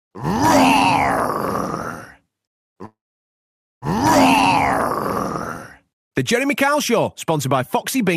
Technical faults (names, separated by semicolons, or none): call audio freeze